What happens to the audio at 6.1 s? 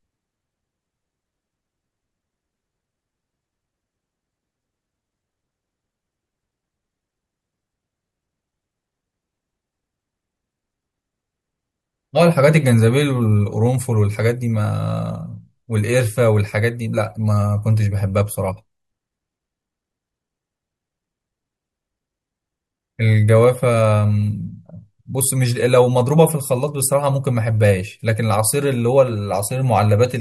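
Nothing goes wrong at 6.1 s; the speech carries on intact through that moment with no audible fault.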